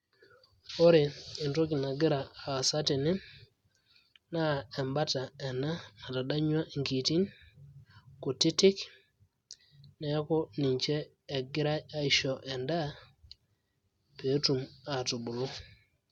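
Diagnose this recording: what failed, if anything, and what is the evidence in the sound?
Nothing failed; no stage shows any audible fault.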